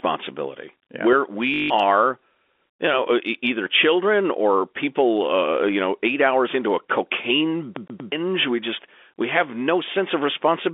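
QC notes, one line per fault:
1.54–1.70 s, packet loss with last packet repeated: About 160 ms of the stream failed to arrive, and the receiver filled the gap by replaying the last good packet until fresh data resumed. The length points to roughly eight 20 ms packets. The same short slice therefore loops end to end, producing a brief robotic stutter with a buzz or flutter at the packet rate, near 50 Hz. The band-limited telephone sound of the line carries through the repeats.
7.75–8.12 s, CD stuck on one turn: Just after "hours into a cocaine", playback keeps jumping back to the same point, as a laser thrown back one track by a scratch would on each revolution. A 122 ms stretch of audio plays three times over, with a short mute at every jump. The result is the fast, evenly spaced stutter of a skipping disc, lasting a little over a third of a second before normal progress resumes.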